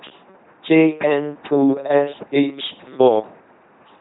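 Throughout, the speech has passed through an LPC-10 vocoder, its heavy coding damage fitting a 2.4 kbit/s rate. A ten-pole filter driven by pulses or noise turns it into a buzzing, mechanical robot voice with nothing above 3.9 kHz.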